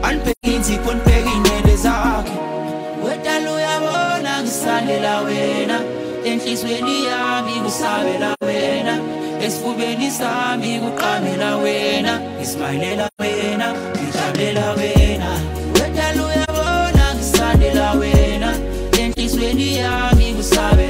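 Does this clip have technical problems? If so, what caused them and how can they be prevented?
Yes: AAC frame loss with muting, with soft-edged gaps at 0.31 to 0.46 s, 8.33 to 8.43 s, 13.07 to 13.21 s, 16.44 to 16.50 s and 19.13 to 19.19 s. Each gap lasts a whole number of roughly 43 ms units (128 ms, 85 ms or 43 ms), which points to lost AAC frames. The decoder zeroed their spectrum, and the overlapping windows fade the sound out and back in. That smooth fade distinguishes it from a hard sample dropout. Error-resilient transport or packet-loss concealment would prevent it.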